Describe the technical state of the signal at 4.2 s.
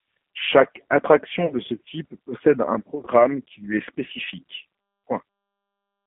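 At 4.2 s the speech carries G.729 codec damage, as it does throughout, with a rough, synthetic quality that fits an 8 kbit/s codec rebuilding the speech from filters and pulses. A spectrogram shows nothing above about 3.4 kHz or below 150 Hz.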